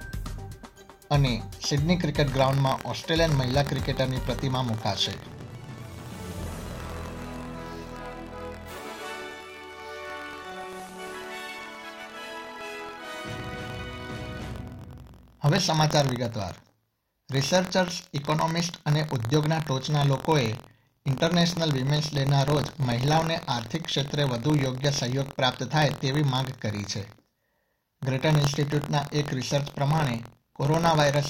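The audio carries buffer tearing from 2.28 s to the end. A steady robotic buzz rides on the signal at 43.1 Hz. It is present only while there is sound. The rate fits a 1024-sample buffer. The writer and the hardware reader have slipped out of step and cross inside every period. So a small slice of each buffer holds audio from about a tenth of a second earlier. Hard joins on both sides cause the rattle.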